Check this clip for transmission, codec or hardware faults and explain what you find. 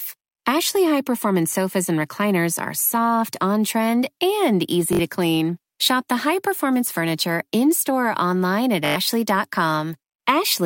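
The speech has two Bluetooth stutters. The first runs from 4.93 to 4.99 s, after "soft on trend and" and before "to clean". The second runs from 8.86 to 8.96 s, after "store or online at". Packets arrived late or not at all. The receiver kept replaying its last short buffer until fresh data came. That gives a brief buzzing, machine-gun repeat. About 61 ms is lost first, then about 102 ms, which fits roughly three and five dropped packets.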